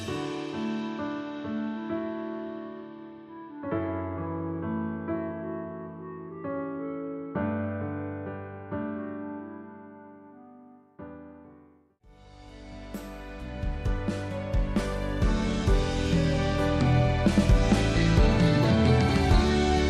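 Nothing technical goes wrong anywhere in the clip, so there's nothing to flag here.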